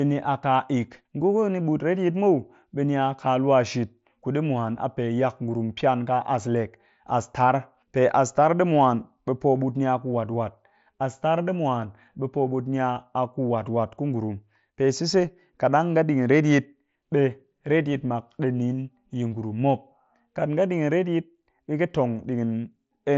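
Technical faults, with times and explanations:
No technical faults, with times and explanations, to report for this speech clip.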